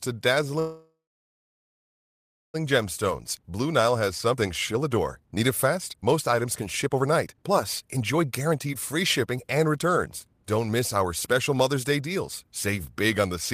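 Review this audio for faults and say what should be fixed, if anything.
Call audio freeze, 0.59 to 2.56 s: packets were most likely held up in transit, so the jitter buffer ran dry and the receiver had nothing new to play. It stretched the last sound into a fading buzz or hiss, then about 1.56 s of silence, so the whole stall adds about 1.95 s of delay. When audio resumes it continues where it stopped, with nothing lost. A larger or adaptive jitter buffer and steadier network routing would prevent this.

Jitter buffer speed-up, 2.65 to 12.73 s: once the delayed packets arrived together, the buffer held far more audio than its target, so the receiver cut short pitch-period slices again and again to work the delay back down. About two seconds were removed, making the speech run at 119% of normal speed with the pitch unchanged, so it sounds noticeably rushed for roughly ten seconds. Draining the excess more gently, with a lower maximum time-compression rate spread over a longer stretch, would prevent this.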